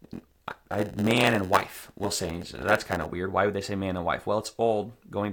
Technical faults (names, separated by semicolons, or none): block size mismatch (padded)